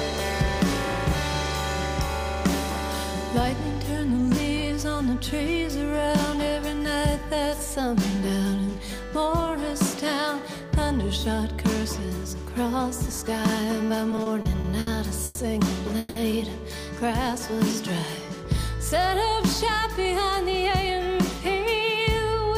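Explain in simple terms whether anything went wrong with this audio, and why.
Yes, three kinds of network problem can be heard in the second half of the clip.

From 14.11 to 14.89 s there are repeated stalls (stutter). The audio catches six times, with about 180 ms of filled-in sound in total and the longest hold about 70 ms, so nearly a quarter of that stretch is padding. The packets carrying the audio arrived late, the receiver's buffer kept running dry, and it stretched the last sound to cover each wait. Nothing is lost, but the sound drags and hiccups.

Two short call audio freezes follow, at 15.25 to 15.39 s (120 ms) and 15.99 to 16.18 s (170 ms). In each, the sound hangs as a smeared continuation of the last moment instead of dropping to silence, then picks up exactly where it left off. The likely cause is packets being held up in transit, emptying the buffer. Each freeze pushes the rest of the audio later by its own length, and nothing is skipped.

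From 19.83 s to the end, at 22.56 s, there is a jitter buffer speed-up. After the earlier delays the buffer held more audio than it needed, so the receiver trimmed tiny slices, roughly 70 ms in all, to catch up. Playback runs about 3% fast at unchanged pitch.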